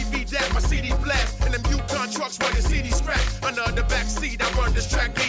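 No audible technical faults.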